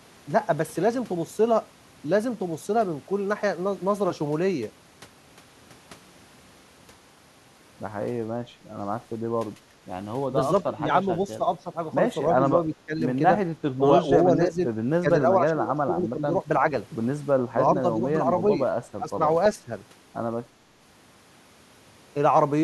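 Speech clip: at 9.70 to 9.81 s the room tone dips by about 8 dB for roughly a tenth of a second, background gated by the echo canceller as it clamps down on the mic. Then at 10.63, 12.66, 13.77, 15.02, 17.45, 18.97 and 19.55 s the talker keeps ducking or breaking up, by as much as 15 to 20 dB in places. That's likely speech suppressed in double talk, with the canceller mistaking the near voice for echo while both sides talk.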